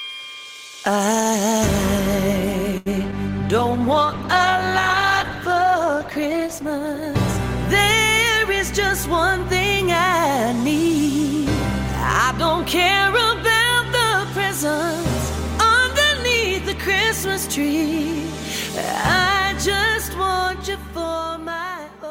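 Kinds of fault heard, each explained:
Short stall from a late packet: at about 2.77 s a packet showed up late and the jitter buffer ran dry, so the receiver held the last sound for 85 ms, then carried on from the same spot. Nothing's lost, but it drags briefly and adds 85 ms of delay.
Short concealed packet loss: two quick hits, at 3.02 to 3.05 s and 3.11 to 3.14 s. Each time 20 ms never arrived, and the receiver patched the gap by extending the preceding sound and blending back in. You hear small smears or wobbles rather than clean continuity.
Call bitrate drop: from 3.59 to 8.33 s the bandwidth estimate fell and the encoder went from 64 kbps down to 12 kbps, sitting at the bottom for about 2.9 s. At that rate the coding gets coarse and the highs get trimmed, so it sounds rough and muffled.
Jitter buffer speed-up: between 8.91 and 10.89 s the buffer was holding more than it wanted, so the receiver snipped out tiny pitch-period chunks, about a tenth of a second in total. 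Playback runs at 105% speed with the pitch unchanged, so it feels slightly hurried.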